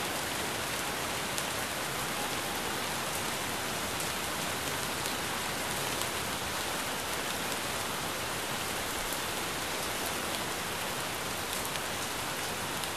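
From 1.81 s to the end, distortion sits on everything, and the quieter stretches fill with gritty noise instead of falling silent. The likely cause is a stuck bit, where one data bit is held at a fixed value so about half the samples are pushed off by that bit's weight. Unlike clipping, the distortion does not depend on how loud the sound is. The noise in the low-level passages, which flips with the waveform's sign, sets it apart from ordinary hiss or overload.

At 11.77 s a brief glitch cuts through, lasting about 18 milliseconds. This is damaged data in a compressed stream: a stretch of the encoded file was corrupted, so the decoder misread the affected frame, lost its place, and resynchronised on the next frame header. A dropout leaves a gap of silence. This instead comes from the decoder losing sync.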